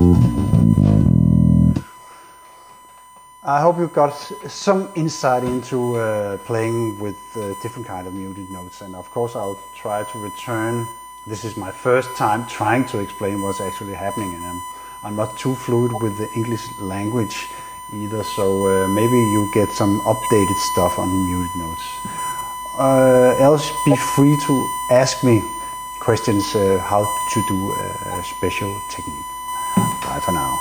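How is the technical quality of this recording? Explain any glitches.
The technical quality is poor. Two faults run through the whole recording.

A USB whine sits underneath everything, a steady 1 kHz tone. It sits at roughly 20 dB below the main sound. USB traffic in 1 ms frames leaks through power or ground. That fixed timing produces the unchanging pitch.

Gain pumping is also present throughout. The gain swings by around 20 dB. Loud and soft parts sound squashed together. The likely cause is input gain set far too high, with a fast limiter clamping down repeatedly.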